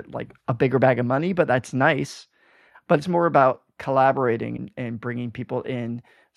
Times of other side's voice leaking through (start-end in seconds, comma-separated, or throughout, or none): none